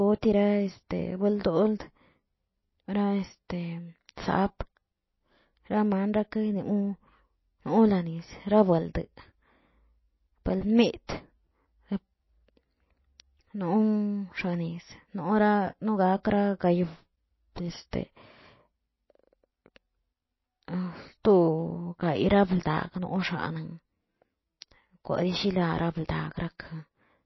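From start to finish the speech sounds watery and swirly, with thin, metallic edges on sibilants and nothing above about 5.8 kHz. That fixed treble ceiling and the plainly audible damage are likely MP3 compression, at a very low bitrate around 24 kbps.

At 17.91 to 17.93 s, a short hiss of about 21 ms runs ahead of a sharp attack, which sounds softened. This is pre-echo: the codec spreads quantisation noise across its whole block, so noise meant for the loud onset leaks into the quiet moment before it.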